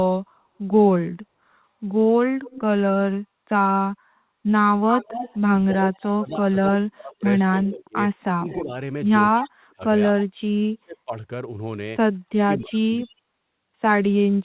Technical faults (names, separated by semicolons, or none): echo leak; speech suppressed in double talk